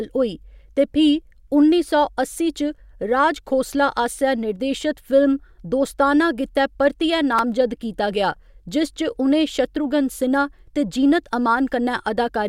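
New audio failed to reach the output in time, so the device played its last 5 ms buffer once more, a repeated buffer, at 3.74 s just before "आसेआ निर्देशत", and at 7.39 s between "दोस्ताना गित्तै परतियै" and "कीता गेआ जिस". Each hard join is heard as a brief click, with only a few milliseconds of speech lost.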